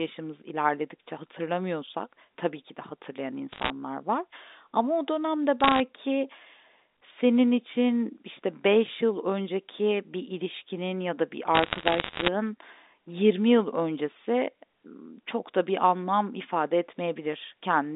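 Around 3.52 to 3.70 s, again at 5.60 to 5.80 s, and in a longer stretch from 11.55 to 12.28 s, you get bit errors on a digital phone line: flipped bits in the A-law samples, so single samples change, and hits on high bits tick sharply. It's roughly one to two percent of bits in the first burst, about 0.7 percent in the second, about one percent in the last. It sounds like crackle over the band-limited telephone speech, which itself stays intact.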